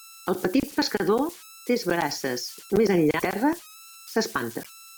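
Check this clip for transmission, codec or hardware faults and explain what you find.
Two faults turn up: a converter problem running through the whole speech clip, and two brief MP3 decoding breaks.

Converter idle tones: an undithered delta-sigma converter settles into repeating bit patterns, leaving a whistle around 1.5 kHz, about 21 dB below the speech, throughout.

Broken MP3 bit reservoir: likely lost frames sent the decoder borrowing wrong bytes, producing short chirps or gaps at 3.18–3.22 s, just after "pescador tres braces més", and at 4.62–4.66 s, each about 40 ms long, with 24 ms frames.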